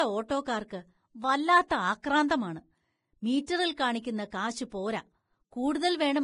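Vorbis compression runs through the whole of this speech clip: the treble is gone above about 10.6 kHz, and what remains sounds hissy and grainy, with roughened tones. That heavy damage is likely the result of Vorbis encoding at a low bitrate, around 27 kbps, where fine high-frequency detail is quantised so coarsely that it turns into noise. Pre-echo appears from 1.68 to 1.70 s, a short hiss lasting about 24 ms just before a sharp onset, which sounds smeared. The codec spread its quantisation noise across the whole transform block, so noise sized for the loud attack also fills the quiet moment ahead of it.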